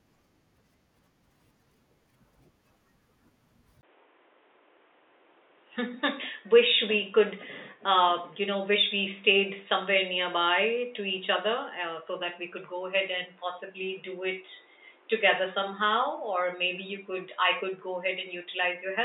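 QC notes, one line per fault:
3.81–19.04 s, likely input switched to a poorer device: after a 20 ms gap, speech turns dull, about 10 dB quieter, cut off above 3.8 kHz, newly noisy.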